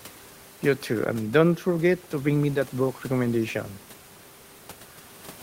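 Nothing goes wrong here at all, with just the room's own background noise sitting quietly underneath, about 26 dB below the speech.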